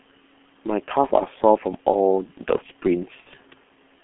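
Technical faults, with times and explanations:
Throughout, G.723.1 codec: the speech is muffled and hoarse, with everything outside about 200 Hz to 3.5 kHz gone and consonants smeared. That heavy damage fits a roughly 6 kbit/s coder working in 30 ms frames, slowly re-fitting its voice model.
1.07–1.15 s and 3.20–3.27 s, VoIP packet loss concealed by the speech codec: the decoder papers over the gaps by extending its last pitch and filter, so the sound turns briefly into a buzzy tone or coloured noise that fades, then stays weak or distorted as it recovers. That fits one and then two lost 30 ms frames.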